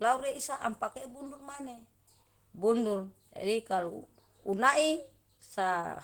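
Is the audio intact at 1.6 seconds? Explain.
No. At 1.6 seconds, as throughout the whole clip, the audio carries Opus compression damage, likely from encoding at a rate low enough to push the encoder into its hybrid speech mode, which fits a bitrate around 16 kbps. With so few bits, fine spectral detail is coarsely approximated or filled with noise. Although the bandwidth stays full, up to about 20.2 kHz, the speech sounds plainly muffled, hoarse and grainy.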